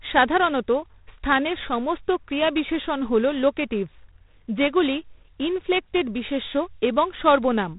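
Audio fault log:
Throughout: G.726 ADPCM, a coarse one that sounds like the 24 kbit/s mode. Each sample keeps only a few bits of the gap between the real signal and a running prediction, so the speech carries a harsh, rasping hiss that follows its level, and everything above about 3.8 kHz is gone.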